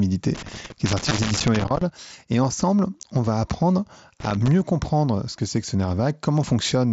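An irregular burst of scratchy crackle runs from 0.35 to 1.82 s, the audio chopped rather than steadily noisy. That is loose connector crackle: a worn or dirty contact keeps making and breaking as it shifts, cutting the signal in and out, and any DC on the line adds clicks at each break. Inside that burst, at 1.09 s, there is a smear of about 15 ms.

That smear is concealed Bluetooth headset packet loss. Its length fits two lost frames on the link between headset and phone, and the receiver bridged the gap by repeating the closest-matching piece of the preceding waveform. A second, shorter patch of about 7.5 ms, fitting a single lost frame, sits at 3.03 s, just before "on va apprendre", and is nearly hidden, carried over the mSBC wideband link.

The connector crackle returns from 4.20 to 4.48 s, between "ensemble on va apprendre" and "comprendre ce que c'est". It is the same ragged, scratchy chopping, only briefer, as the contact breaks again.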